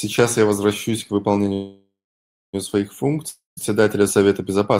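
Right after "я возвращаюсь к", at 1.53 s, there's a call audio freeze lasting to 2.55 s. The last sound smears into a fading buzz, then about 0.62 s of silence. It's likely a jitter buffer running dry while packets stalled. Speech resumes intact, just a second late.

From 3.29 to 3.59 s comes a long network dropout. Another fading buzz gives way to about 0.15 s of silence, and when speech returns about 0.28 s of it is simply gone, likely because those packets never arrived at all.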